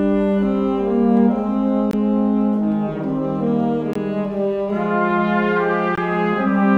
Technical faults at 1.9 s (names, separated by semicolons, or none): gap between chunks